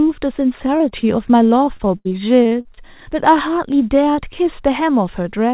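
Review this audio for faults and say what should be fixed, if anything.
Short concealed packet loss at 0.78–0.82, 0.90–0.93 and 1.01–1.05 s: each time about 20 ms of audio arrived late, and the decoder extended the preceding sound, leaving brief smears.

Repeated packet loss (robotic sound) from 1.65 to 2.79 s: eight dropouts, the longest 74 ms, each patched by extending the last sound, so about a fifth of that stretch is choppy.

To prevent this, stabilise the network route or enlarge the jitter buffer so packets arrive in time, and add forward error correction. Separately, the call codec's cutoff at 4 kHz limits the audio's bandwidth.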